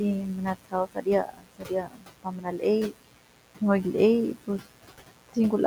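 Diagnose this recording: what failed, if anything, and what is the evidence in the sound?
Mains buzz sits under the whole recording, a steady raspy tone at roughly 15 dB below the speech. It fault lies in the analogue wiring. Switching spikes at twice each 60 Hz cycle leak in through a dimmer, rectifier or poor shielding, spraying harmonics into the kilohertz range.

Noise suppressor artifacts run throughout, in the call processing stage. The suppressor cuts bands it judges to be steady noise, frame by frame. The residual noise dips between phrases and swells under the speech.

Speech cut by the noise suppressor occurs at 0.55–1.07 s, 1.26–2.63 s, 2.91–3.61 s and 4.34–5.37 s. Parts of the speech drop by about 18 to 19 dB, sounding swallowed. The suppressor mistook quieter speech for noise and attenuated it with the background, beneath which room noise about 17 dB below the speech remains.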